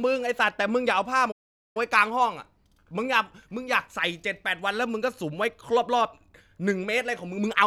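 A playback stall interrupts the speech at 1.31 s, cutting it off mid-flow into silence that lasts until 1.77 s, a gap of about 437 ms. The break is abrupt, with no fade, and long enough to hear clearly as a dropout rather than a pause in the speech. The likely cause is the player running short of buffered data, or its output thread being blocked, so nothing reached the output until it recovered.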